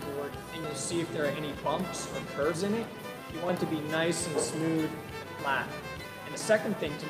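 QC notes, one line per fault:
0.64, 2.54, 3.49, 5.39, 6.34 s: audio missing between chunks. About 50 ms skipped at each joint, likely lost while closing and reopening 1-second recording chunks.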